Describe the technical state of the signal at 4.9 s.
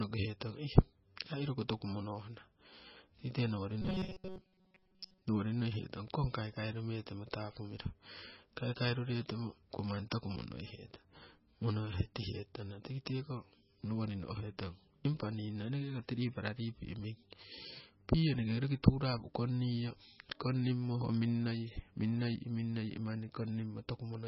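Robotic sound from repeated short buffers runs from 3.82 to 5.25 s, so it covers 4.9 s. The likely cause is audio arriving too seldom, with playback filling the gaps by looping a fragment of about 5.3 ms while most of the real audio in that span is skipped. The repetition imposes a fixed buzz at 188 Hz, turning the speech into a stiff, metallic drone that only loosely follows its original contour.

MP3 compression damage is also present at 4.9 s, as it is across the whole clip. The damage is heavy. Weak frequency components flicker in and out between frames, giving a watery, swirling texture and blurred onsets. That degree of damage points to an encoder starved of bits, at a bitrate of roughly 19 kbps.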